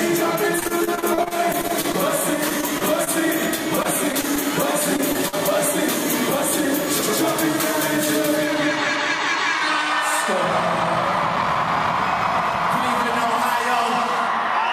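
Between 0.59 and 1.95 s, again at 2.49–3.09 s and 3.83–4.38 s, packets kept arriving lost or late. The receiver patched each hole by extending the last sound, producing choppy, robotic audio with pieces missing: repeated packet loss. Then at 4.96–5.00 s, 5.12–5.17 s and 5.29–5.35 s, single 20 to 40 ms losses were concealed the same way, each a brief smear or wobble: short concealed packet loss.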